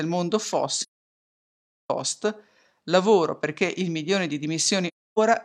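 AAC frame loss with muting hits this speech twice. The decoder received nothing for a run of frames, zeroed their spectrum, and let the overlapping transform windows taper the sound down and back up. From 0.82 to 1.90 s a gap of about 1.07 s, consistent with some 25 lost frames, fades into silence. At 4.87 s, just after "perché il milione di", a second soft-edged hole runs to 5.19 s.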